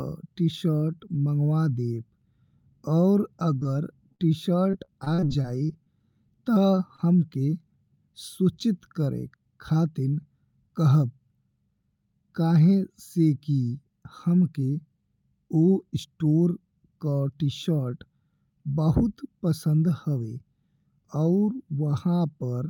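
Short concealed packet loss first appears at 3.59 s. Two holes sit back to back, from 3.59 to 3.63 s and from 3.63 to 3.67 s. Each is about 20 ms of missing audio, which fits 20 ms packets. Another follows from 4.15 to 4.21 s, about 40 ms long. The last is at 6.96 to 7.00 s, again about 20 ms. In each case the receiver bridged the hole by extending the preceding speech, then blended back. Each sounds like a brief smear or wobble.

Repeated packet loss, with a robotic sound, runs from 4.71 to 5.88 s. Here the speech breaks up nine times in quick succession. About 200 ms goes missing in total, with the longest hole about 37 ms. Concealment fills roughly a sixth of the stretch. Each patch continues the last sound before the next hole arrives. The speech turns choppy, with pieces dropping out.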